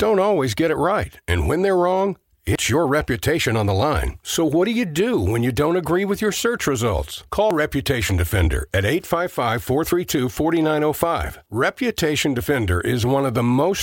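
At 2.55, 7.51 and 12.46 s the speech jumps ahead by about 50 ms, with both sides joined and no silence between them. That even 5 s spacing, unlike a dropout's silent gap, points to audio likely missing between chunks as the recorder switched segments.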